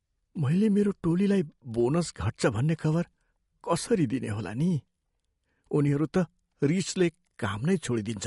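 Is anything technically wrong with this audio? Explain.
Yes. MP3 compression runs throughout: the clip is likely low-bitrate MP3, with damage consistent with roughly 48 kbps. Short of bits, the encoder discarded everything above 11.2 kHz and let weak frequency components switch on and off between frames, leaving the speech dull, swirly and watery.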